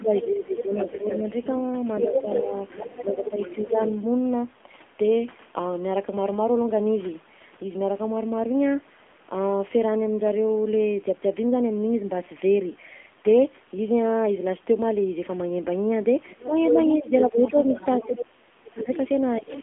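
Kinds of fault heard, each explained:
AMR narrowband mobile codec: Throughout, the speech sounds buzzy and synthetic, squeezed into a telephone band of roughly 200 Hz to 3.5 kHz with nothing above 3.8 kHz. This is a low-rate mobile vocal-tract model, with damage that fits about 7.4 kbps.
Speech suppressed in double talk: The talker's level dips about 10 dB between 0 and 1.22 s, about 5 dB between 3.02 and 3.79 s, and drops as much as 30 dB from 16.47 s. The likely cause is an echo canceller ducking everything while both sides spoke.
Other side's voice leaking through: A second voice is heard under the talker from 0.14 to 3.95 s and from 16.28 to 18.19 s, about 5 dB down. It returns from 18.79 s to the end, about 15 dB down. This is likely loudspeaker echo the canceller failed to remove.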